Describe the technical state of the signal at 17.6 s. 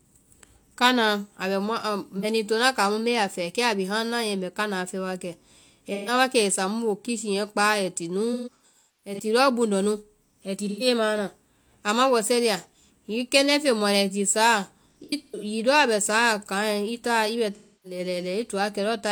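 At 17.6 s the signal is inside an AAC frame loss with concealment, running from 17.55 to 17.99 s, which fits roughly seven lost frames. The decoder rebuilds the gap from the last good spectrum, so the speech smears into a noisy, phasey wash rather than falling into the clean silence of a plain dropout.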